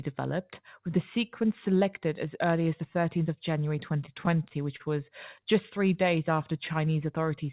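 From 4.06 to 4.82 s there's a patch of repeated stalls (stutter): six short hiccups where packets showed up late, the jitter buffer ran dry, and the receiver stretched the last sound to cover, about 94 ms in all, the longest 28 ms. Nothing drops out, but it drags and stutters.

Then at 6.03 to 6.53 s you get a jitter buffer slow-down. The buffer was rebuilding its reserve by repeating pitch periods, adding about 43 ms, so that stretch plays at roughly 93% speed with the pitch unchanged. Sounds come out a bit drawn-out over the narrowband G.711 call audio, which stops at 4 kHz.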